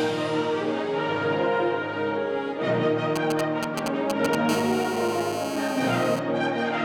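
A 2G mobile phone close to the recording chain shows up twice, its radio pulses being rectified by the audio circuitry and turned into audible interference. From 3.16 to 4.35 s the handset is only exchanging signalling, transmitting in short clusters rather than continuously, so the sound gets GSM signalling bursts: a galloping dit-dit-dit of short buzzes pulsing at the 217 Hz burst rate, fairly loud at only a few dB below the wanted audio. From 4.49 to 6.19 s the phone is in a call and transmits in bursts 217 times a second, which produces a steady GSM phone buzz. This is a hard, raspy 217 Hz tone with many harmonics, about 11 dB below the signal, and it is unrelated to the material it sits over.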